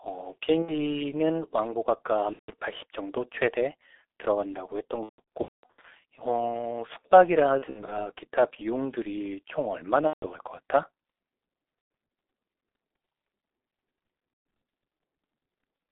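The whole speech clip passes through the G.723.1 codec at 6.3 kbit/s. The band stops near 3.7 kHz. The voice sounds heavily muffled and hoarse, with smeared consonants.

VoIP packet loss concealed by the speech codec occurs at 0.62–0.84, 2.33–2.51, 5.03–5.86, 7.58–8.07, 10.07–10.27, 11.81–11.90 and 14.33–14.45 s. The decoder rebuilds missing audio from its last pitch and filter, so gaps turn into a fading buzz or noise. The 5.03 s event is worst, with scattered losses and one 210 ms run.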